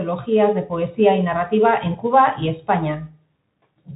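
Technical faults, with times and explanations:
Throughout: Bluetooth CVSD headset codec. The speech has been squeezed through the narrowband headset codec, and the damage is plainly audible. Nothing above 3.8 kHz survives, so the sound is dull and boxy. Because each sample is coded as a single up-or-down step whose size adapts, and the rate fits a 64 kbps stream, loud high content outruns the step and distorts. S sounds turn scratchy, and a granular hiss sits under the speech.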